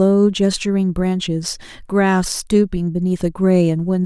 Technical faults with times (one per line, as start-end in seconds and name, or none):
none